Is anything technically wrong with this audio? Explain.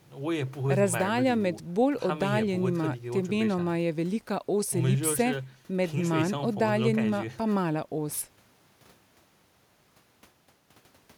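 No, there is nothing technically wrong with this recording.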